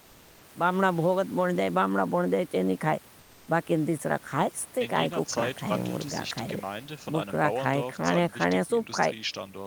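From 3.19 to 3.47 s the sender likely stopped transmitting during a pause in the speech, and the receiver filled those 280 ms with comfort noise in place of the background. The textured room noise gives way to a smooth, featureless hiss about 1 dB quieter.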